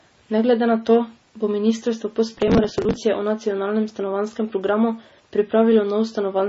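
Throughout the recording, the speech has no content above 7.6 kHz, and the remaining band sounds watery and swirly. Sibilants turn metallic, and consonant onsets smear. This is most likely MP3 compression at a very low bitrate, roughly 24 kbps. The encoder was short of bits, so it cut the treble at a fixed point and zeroed weaker spectral lines. Those lines drop in and out from frame to frame, which produces the heavy, unsteady texture.

From 2.34 to 2.97 s there is processor overload crackle, starting after "to bo ministrstvo po" and ending before "o nacionalnem stanovanjskem programu". The processor missed dozens of consecutive deadlines for buffers only a few milliseconds long. Each missed buffer was skipped outright, leaving a tiny hard-edged gap. Over those 0.63 s the gaps merge into a gritty, tearing crackle laid over the speech, which stops once the load clears.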